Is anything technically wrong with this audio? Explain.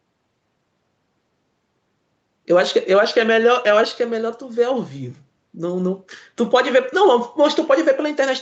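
No, nothing in this speech clip is technically wrong. It has passed through a call's microphone processing and codec, so nothing is heard above 8 kHz, consistent with Opus running at a moderate bitrate around 48 kbps.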